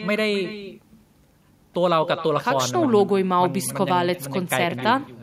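From start to finish, the speech carries an echo with no canceller: the far end is playing the call through a loudspeaker, its microphone catches that playback, and nothing subtracts it before sending it back. Each phrase therefore returns roughly a third of a second later, about 13 dB quieter, sounding thinner. On a waveform, every burst is trailed by a smaller copy; a spectrogram shows fainter, time-shifted duplicates of each syllable's harmonic pattern.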